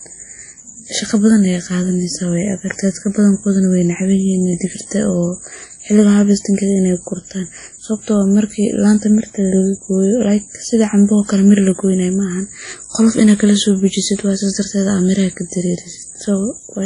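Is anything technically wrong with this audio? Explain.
Yes. Throughout the speech, audible WMA compression damage sounds ringing and washy, with hiss that swells with the voice. The likely cause is a 32 kbps encode, whose long transform blocks smear quantisation noise. A spectrogram shows nothing above 10.1 kHz.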